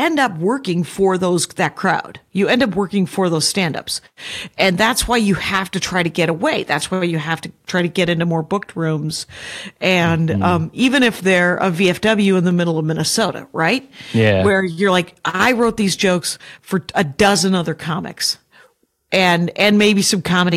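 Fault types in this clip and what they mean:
Hard clipping: speech driven about 6 dB past what the chain can pass, so the loudest peaks are sheared flat, leaving brief crackle on a small fraction of samples; unlike soft saturation, the edges are abrupt, giving bright, spiky distortion rather than smooth rounded warmth.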